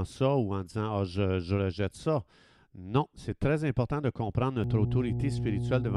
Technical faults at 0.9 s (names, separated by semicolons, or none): none